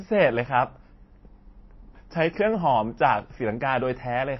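From start to finish the speech carries audible damage that is likely from MP3 compression at a low bitrate, around 24 kbps. Treble stops sharply at 5.8 kHz, leaving a flat ceiling on the spectrogram. Weak detail flickers into watery, swirling patches, and sibilants chirp metallically.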